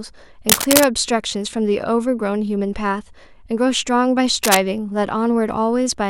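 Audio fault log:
0.49–0.84 s and 4.44–4.60 s, cable scratch noise: a worn cable or connector was likely moved, making its contact resistance fluctuate rapidly and inject dense, uneven bursts of noise, heard as a brief scratching rustle roughly as loud as the speech.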